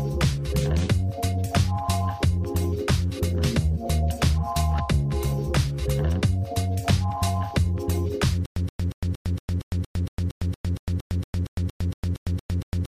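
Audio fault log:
8.46 s to 12.88 s (end), stutter with silent gaps: a 125 ms fragment plays, then about 107 ms of silence, and the pair repeats 19 times at a steady 231.5 ms period until the clip ends. This is likely a stalled player or stream replaying its last buffer on each retry before running dry. The evenly spaced silences set it apart from a seamless loop, and the repeated identical burst sets it apart from plain dropouts. Whatever should have played here is missing.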